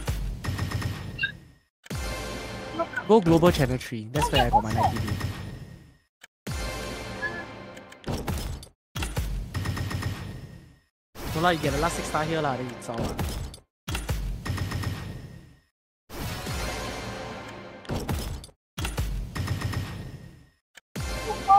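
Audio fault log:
4.48 s and 9.55 s: damaged data in a compressed stream. Two brief blips where the decoder hit garbled frames, lost sync, then caught the next header.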